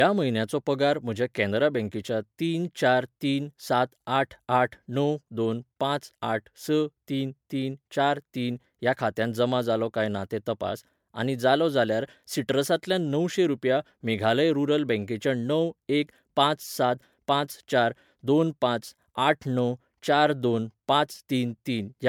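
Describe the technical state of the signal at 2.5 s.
Generation loss is present at 2.5 s and runs through the whole speech clip. The sound is swirly, smeared and hollow, with blurred attacks. The likely cause is repeated MP3 decoding and re-encoding, roughly five passes at something consistent with 128 kbit/s. Each pass quantises again on a shifted frame grid, so noise and spectral gaps accumulate beyond what one encode would leave.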